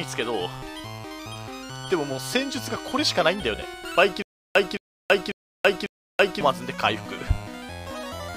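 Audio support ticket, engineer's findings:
Stutter with silent gaps, 4.22–6.41 s. A 215 ms fragment repeats four times, each followed by about 330 ms of digital silence, at a steady 546 ms period. Likely a stalled player or stream buffer replaying its last chunk on each retry; the audio for that stretch is lost.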